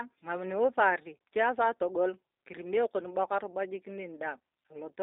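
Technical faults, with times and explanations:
Throughout G.729 codec: the speech stops above 3.7 kHz and sounds plainly rough and synthetic. That fits an 8 kbit/s codec rebuilding speech from a vocal tract model.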